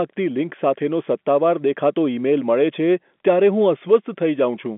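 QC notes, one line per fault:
No faults heard in this speech clip.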